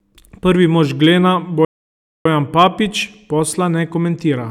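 A speech recording with two kinds of fault. Hard clipping occurs twice, from 1.03 to 1.10 s and again from 2.59 to 2.67 s. In each, the peaks drive the signal past the ceiling of a stage in the chain, by about 1 dB the first time and about 2 dB the second, so the waveform tops are sliced flat. The flattened tops add high-order harmonics, heard as a short crackle on the loudest parts of the speech. Between these, a playback stall cuts the output to silence from 1.65 to 2.26 s, a gap of about 0.6 s in mid-flow before the speech resumes. The likely cause is the player's buffer running dry or its audio thread being blocked, so nothing reached the output until it recovered.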